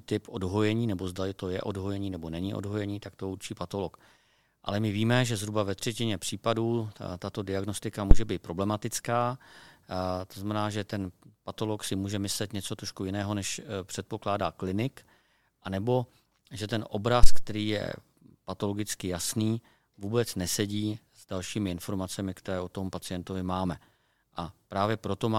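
At 8.11 s, after "třetině případů tato diagnostika", and at 17.23 s, after "klinik anebo že ten", a phantom power thump occurs. A supply switching on or off on the live input sends a step through the coupling capacitors, producing a deep thud that peaks at about −2 dBFS and dies away in 32 ms and 50 ms. The waveform shows a large one-sided swing, and the spectrogram a brief low-frequency smear.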